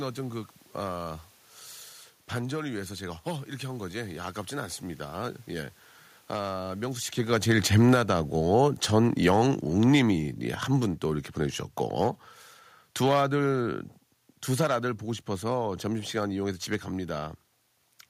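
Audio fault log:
7.18–11.69 s, automatic gain falling: the level of the speech sinks steadily by about 9 dB over these four and a half seconds, and the room noise beneath it drops by the same amount, which separates this from the talker shifting position just before, around 7 s. The automatic gain control judged the input too hot or its background noise too strong and wound its gain down gradually, so everything in the signal fades together rather than the voice alone.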